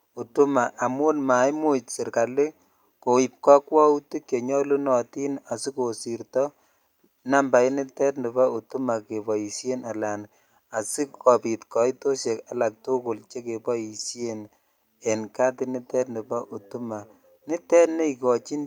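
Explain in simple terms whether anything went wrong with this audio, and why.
No technical faults are audible.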